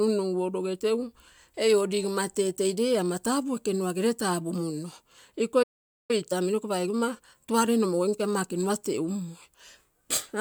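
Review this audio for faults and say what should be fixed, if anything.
A playback stall cuts the speech off mid-flow at 5.62 s, and the output stays silent until 6.11 s, a gap of roughly 0.46 s. The likely cause is that the player's buffer ran dry or its audio thread was blocked, so it had nothing to send to the output for that period. A larger or more robust jitter buffer, together with a playback thread that cannot be starved by other work, should prevent this.

Time-compressed catch-up follows directly, from 6.11 to 9.11 s. Over those three seconds the speech runs at about 1.1 times its normal rate while the pitch stays the same. The player is removing small slices of audio to work off the backlog that built up during the stall, then returns to normal pace after 9.11 s. Fixing the stall would remove the need for catch-up. Otherwise, spreading the compression over a longer span at a lower rate would make it less noticeable.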